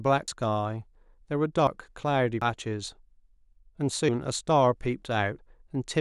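Dropped buffers at 0.28, 1.67, 2.42, 4.09 and 5.39 s, likely from overruns: each time about a tenth of a second of speech vanishes without any gap, the two edges butted together, so an abrupt skip forward is heard.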